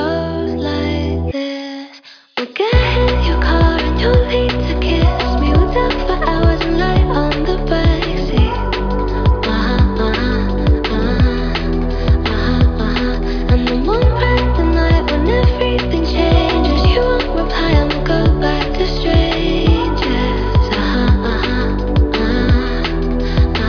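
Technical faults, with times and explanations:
No technical faults detected.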